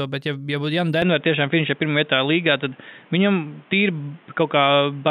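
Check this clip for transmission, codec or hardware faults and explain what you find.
One fault is present. From 1.02 s to the end, the input likely switched to a poorer device: nothing above 3.8 kHz remains, so the sound turns dull, the level shifts by about 5 dB, and a new background noise appears well below the signal, with no gap at the switch. That new noise and level shift, not just the lost treble, set it apart from a codec narrowing its bandwidth.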